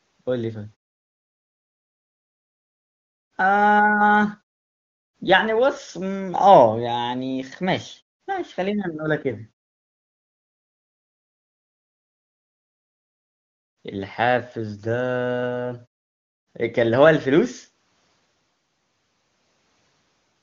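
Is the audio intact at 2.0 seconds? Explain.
Yes, the audio at 2.0 seconds is intact, with no fault audible at that moment.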